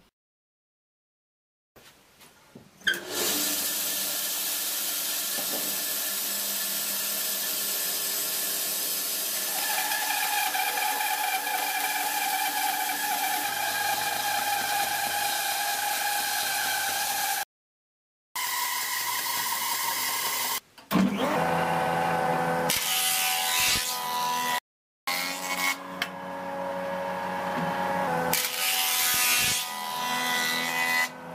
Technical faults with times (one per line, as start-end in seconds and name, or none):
17.43-18.36 playback stall
18.36-21.36 catch-up at higher speed
24.58-25.07 playback stall
25.07-28.07 catch-up at higher speed